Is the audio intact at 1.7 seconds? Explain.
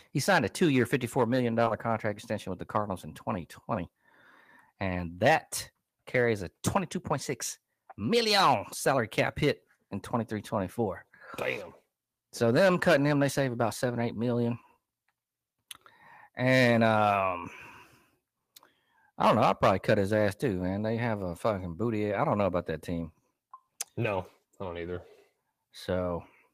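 No. Around 1.7 seconds the speech carries short concealed packet loss. Two back-to-back gaps run from 1.65 to 1.68 s and from 1.68 to 1.72 s, each about 20 ms of missing audio. The receiver covered the holes by extending the sound just before them, in pitch where voiced and as shaped noise where not, then blended back. The result is a brief smear or wobble, and a short consonant there may be lost.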